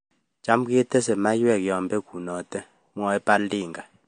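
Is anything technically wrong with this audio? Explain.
Yes. Throughout, the speech sounds watery and swirly, with no content above 9.4 kHz. This is likely MP3 compression at a low bitrate, around 48 kbps, where the encoder drops weak frequency lines frame to frame. A spectrogram shows a hard ceiling and flickering holes.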